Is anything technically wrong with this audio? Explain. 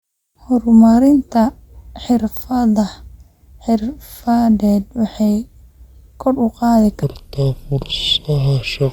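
Yes. From 7.03 s to the end at 8.92 s, the speech suddenly drops into a deep, dragged-out register, every syllable stretched and the pitch sinking by roughly seven semitones. This is a section at the wrong speed: that stretch plays at 0.688 times its original rate, so timing and pitch fall together rather than separately. The likely cause is that the final section was rendered against a mismatched clock during editing or playback, slowing it relative to the rest of the clip.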